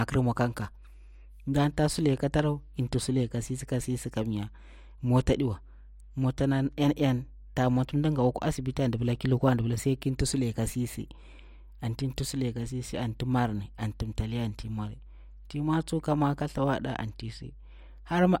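From start to finish the speech sits on mains hum, a steady low tone at 50 Hz running roughly 20 dB below the speech. Power-line current is leaking into the signal path, typically through a ground loop or a transformer near the cabling. Unlike wind or handling rumble, which is broadband and fluctuates, this is a fixed, clearly pitched drone that never changes level, even in the pauses between phrases.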